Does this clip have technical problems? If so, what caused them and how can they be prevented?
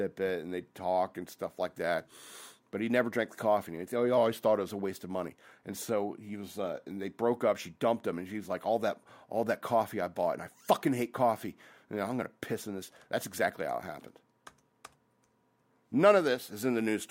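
Yes. A drift correction step occurs from 4.17 to 4.69 s, just before "a waste of money". The speech abruptly slows by 5.7% and drops 101 cents in pitch, about a semitone. Speed and pitch shifting together in one sudden jump is the signature of clock-matching software changing the playback rate in a single step, likely to refill a buffer that was running low. To prevent it, have the resampler correct clock drift with small, continuous rate adjustments instead of one large step.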